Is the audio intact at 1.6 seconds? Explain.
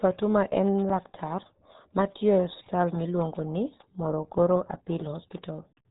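No. At 1.6 seconds, as across the whole clip, the speech sounds muffled and gargly, with nothing above 3.8 kHz. This is the RealAudio 14.4 codec's heavy damage, which fits an 8 kbit/s dial-up-era speech coder discarding detail to fit its tiny budget.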